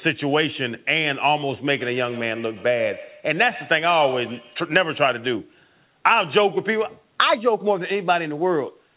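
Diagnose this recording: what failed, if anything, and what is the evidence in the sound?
What failed is in call processing: a feedback echo between two devices, running from 1.72 to 4.72 s. The speech keeps coming back round roughly every tenth of a second, each pass thinner and more ringing, with the loudest repeats at about 15 dB under the direct speech. Two devices in the same room share the call, one mic picks up the other's speaker, and neither echo canceller touches sound it didn't play itself. The band stopping at 4 kHz is just the narrowband G.711 call path.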